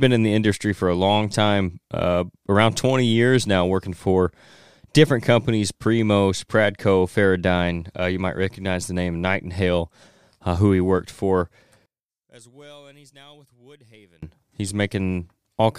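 One channel inverted, from 11.86 s to 14.23 s: the speech suddenly collapses to a faint trace, about 32 dB quieter, then returns at full strength. The likely cause is one stereo channel carrying reversed polarity, so when the two sides are summed to mono the centred voice cancels itself out. What survives is only the small difference between the channels, a faint residue.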